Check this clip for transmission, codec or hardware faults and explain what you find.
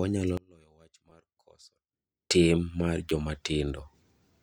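Two kinds of fault are present.

From 0.37 to 2.31 s the speech drops by about 28 dB to a faint residue, likely from one channel inverted cancelling in mono. Unlike a dropout, a faint copy remains.

At 1.10 s and 3.09 s a 5.8 ms slice, fitting a 256-sample buffer, plays twice more. This repeated buffer is heard as a click or brief buzz rather than silence, and roughly 10 ms is lost.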